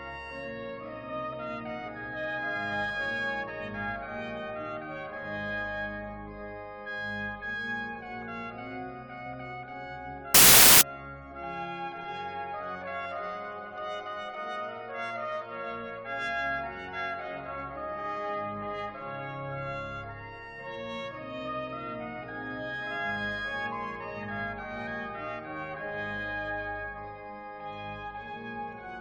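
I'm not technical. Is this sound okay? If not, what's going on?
No. From 10.34 to 10.81 s, samples built from the wrong bytes turn the sound into a harsh roar of loud static, unlike ordinary background hiss, which stays faint and steady.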